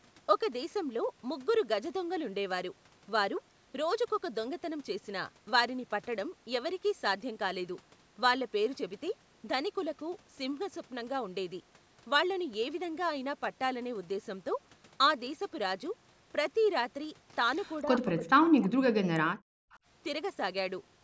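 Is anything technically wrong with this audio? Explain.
Yes. There are two faults near the end of this speech clip.

From 17.84 to 19.7 s, the speech is suppressed in double talk. The voice dips, at its deepest by around 40 dB. About a second and a half of that stretch is affected. The likely cause is both sides of the call talking at once. The echo canceller could not tell this talker from the loudspeaker echo, so it turned everything down.

From 19.72 to 19.79 s, there is an echo leak. A brief scrap of the voice returns 343 ms late, very faint and far below the speech. It is heard as a short ghost. The likely cause is a far end listening on a loudspeaker whose echo canceller missed part of what its microphone caught, so that part was sent back down the line. The band limit at 8 kHz, from the call's microphone processing, is not a fault.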